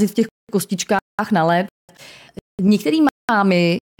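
Gaps between chunks appear at 0.29, 0.99, 1.69, 2.39, 3.09 and 3.79 s, each a 200 ms silence. The speech arrives in half-second chunks with dead air inserted between them, so nothing is lost but the flow is chopped at every join.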